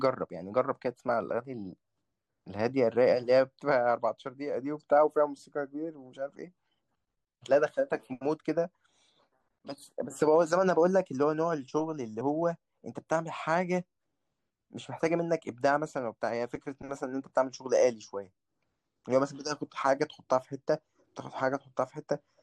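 At about 12.2 s there's a quick blip, the classic sign of damaged data in a compressed stream. A stretch of the encoded data got corrupted, so the decoder lost sync and skipped ahead to the next good frame, leaving a short glitch in the speech.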